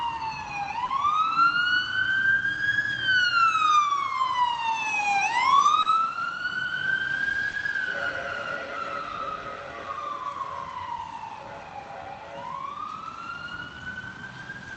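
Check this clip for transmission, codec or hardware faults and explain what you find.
Yes, there are timing faults here, several from the far end's clock not matching the receiver's. You can hear the call codec's usual coding texture and a top end that stops around 8 kHz, which fits Opus at about 32 kbps.

Clock drift between sender and receiver runs through the whole clip. The sender's clock is running slow, by roughly 2 percent, so the jitter buffer keeps draining. The receiver has to pad and stretch to keep going, which gives the audio a faintly uneven, tugging pace from start to finish.

Short stalls from a late packet hit at 0.85 to 0.90 s, 5.82 to 5.87 s and 7.51 to 7.55 s. A packet wasn't there in time, so the receiver held the last sound for 30, 30 and 20 ms and then picked up where it left off. Nothing is lost, but each one sounds like a brief smeared hold with a slight buzz or dip.

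Repeated timing corrections cover 2.57 to 5.61 s and 8.64 to 14.22 s. Both stretches play at 98 percent speed as the receiver repeats small slivers to keep up with the slow sender. That adds around a twentieth of a second in the first stretch and about a tenth in the second, heard, if at all, as small hiccups and a slightly dragging tempo.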